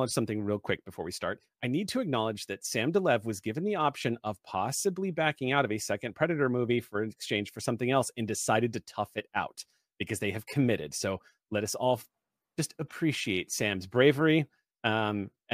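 No technical faults can be heard anywhere in the recording.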